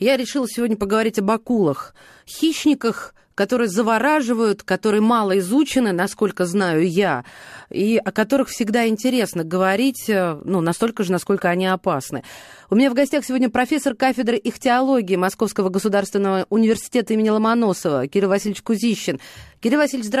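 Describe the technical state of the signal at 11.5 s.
At 11.5 s the speech signal is intact, with no audible dropout, distortion or glitch at that moment.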